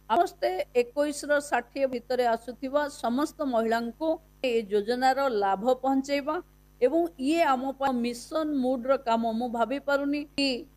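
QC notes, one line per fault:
0.16, 1.93, 4.44, 7.87 and 10.38 s: damaged data in a compressed stream. Each is a very short chirp or blip that snaps in and out. Some bytes in the encoded stream got lost or scrambled right at those spots, so the decoder misread the frame, lost sync and had to hunt for the next valid frame header. The garbage it briefly played out is that little squawk.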